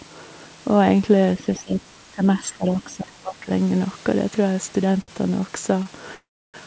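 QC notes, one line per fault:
1.37–3.49 s, speech suppressed in double talk: the level dips, at the deepest by about 25 dB, for about one and a half seconds in total. This is likely an echo canceller attenuating its own talker while the far end spoke. On the waveform the envelope caves in.
1.56–1.60 s and 2.81–2.95 s, other side's voice leaking through: two brief, faint scraps of a second voice, about 25 dB and 30 dB below the talker. This is likely residual loudspeaker echo that the canceller failed to remove. They appear as weak, patchy harmonic traces.
5.01–5.10 s and 5.83–5.87 s, short stall from a late packet: a sound is held too long, by 62 ms and then 21 ms. The jitter buffer ran dry and the receiver stretched the last sound until the packet arrived, so nothing is lost. The spectrogram shows flat, smeared horizontal bands.
6.15–6.56 s, call audio freeze: the audio stops for about 0.39 s. 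A fading tail gives way to about 0.31 s of silence, and then the sound resumes where it stopped. The likely cause is delayed packets emptying the jitter buffer. The waveform shows a decaying tail and then a flat gap.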